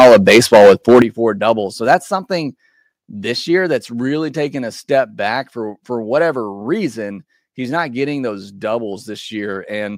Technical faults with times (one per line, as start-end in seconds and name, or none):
0.00-1.02 microphone overload
1.02 microphone volume stepped down
1.90-1.95 microphone overload
2.04 microphone volume stepped down